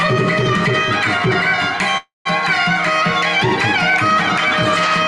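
A call audio freeze runs from 1.97 to 2.27 s. The last sound stretches into a fading buzz, then about 160 ms of silence. Nothing is lost; the sound resumes 0.28 s late, likely from delayed packets draining the jitter buffer.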